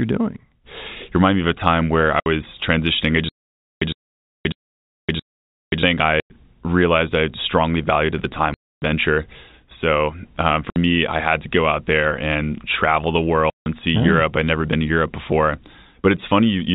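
Packet loss filled with silence first cuts the speech at 2.2 s, leaving a 60 ms hole with hard edges. The same dropouts recur at 4.52 s after "transitioning I" (60 ms), 6.2 s (100 ms), 8.54 to 8.82 s (280 ms), 10.7 s before "me I had to" (60 ms), and 13.5 to 13.66 s (160 ms) between "there and travel the" and "and see oh". Every gap is a multiple of 20 ms, which fits 20 ms packets. Each one simply removes sound, and nothing is repeated.

That repetition is what marks the stutter with silent gaps from 3.29 to 5.83 s. A 108 ms fragment plays, then about 0.53 s of digital silence follows, and the cycle returns every 0.64 s, four times in all. Most likely the stream stalled and replayed its last buffer at each retry, so the material due in those pauses is lost. The 4.52 s loss falls inside this stretch. Throughout, the G.711 telephone coding keeps the band below 4 kHz.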